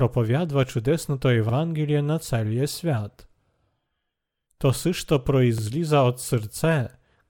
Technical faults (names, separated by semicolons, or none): overlapping chunks